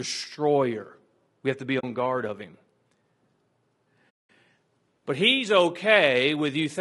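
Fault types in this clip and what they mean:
Low-delay AAC compression: The encoder was likely AAC-ELD, the low-delay AAC used for calls, running at a low bitrate around 32 kbps. Its short frames cannot resolve pitch harmonics finely and spend bits quickly, so across the whole clip the speech is plainly rough and grainy. Noise fills the gaps between harmonics, and the top band sounds dulled or synthetic.
AAC frame loss with muting: Coded frames went missing and the decoder filled their spectrum with zeros. The overlapping windows then fade the audio out and back in, leaving a soft-edged hole. The first gap, from 1.79 to 1.84 s, falls between "have to be" and "guard of him" and fits two lost frames. The second, from 4.10 to 4.29 s, is a longer dropout of about 200 ms, consistent with ten lost frames.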